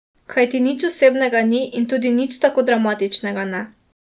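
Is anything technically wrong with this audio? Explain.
No, nothing is technically wrong with this audio.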